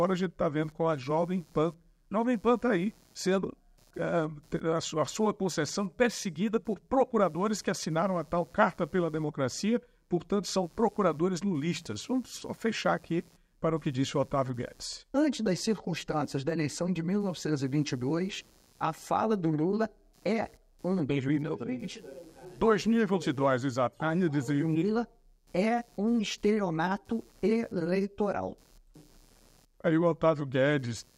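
Computer activity noise runs through the whole recording: a faint buzzing, scratching layer, roughly 35 dB below the sound, pulsing at around 150 times per second and rising and falling independently of the audio itself. It comes from the computer's changing workload. As the processor, graphics card or mouse draw varying current, the shared ground under the audio circuit shifts, and those fluctuations leak into the signal path as this activity-driven chatter.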